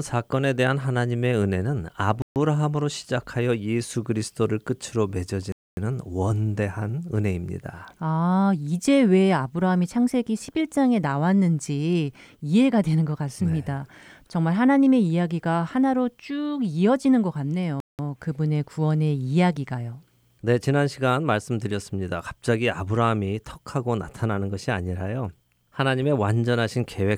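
A speech recording broken by three short gaps of dead silence: 2.22 to 2.36 s (about 140 ms), 5.52 to 5.77 s (about 250 ms), and 17.80 to 17.99 s (about 190 ms). The likely cause is a Bluetooth stall, where held-up wireless packets let the headphones' buffer empty until resent data arrived. The gaps are clean silence, with no smeared or repeated sound filling them, which sets them apart from codec packet-loss concealment.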